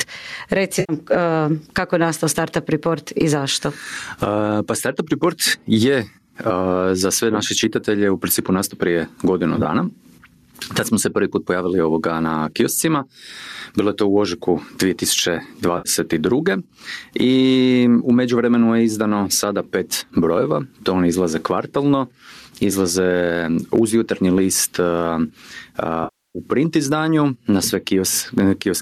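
Gain pumping runs through the whole clip. The input gain is likely set far too high, so a fast limiter clamps down on every loud syllable, swinging the level by about 15 dB. Loud and quiet passages sit unnaturally close, giving a squashed, breathing quality.

AAC frame loss with concealment strikes four times. In each case the decoder patches the missing audio by reusing the last good spectrum. The first loss comes at 0.80 s and blanks about 90 ms, heard as a brief smeared, noisy patch. At 9.57 s, just after "principu nastao prije godinu", 40 ms of dropouts are scattered over 80 ms in runs of about 10 ms, which fits short 10 ms frames. They produce a flickering, phasey roughness. At 15.78 s a 70 ms gap smears again. At 26.04 s the longest loss, 310 ms, decays to a very faint noise floor and then fades back in. Underneath, the light graininess points to low-delay AAC at around 64 kbps.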